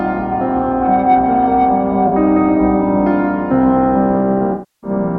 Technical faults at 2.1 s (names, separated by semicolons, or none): AAC frame loss with concealment